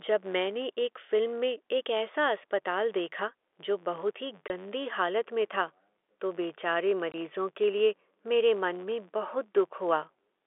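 A steady buzz of about 93.8 Hz runs under the speech from start to end, its ticks growing louder and softer with the level. This is a filter restarted on every block: each block begins from silence with a small transient, and the rate fits a 512-sample buffer.

A brief hard-edged dropout occurs from 4.48 to 4.50 s, just before "गंदी हालत में था", and again from 7.12 to 7.14 s, between "में था तो बेचारे" and "के लिए मेरे मन". Each is packet loss filled with silence: one 20 ms packet went missing and was replaced by nothing. The narrow telephone band of the G.711 line can be heard throughout.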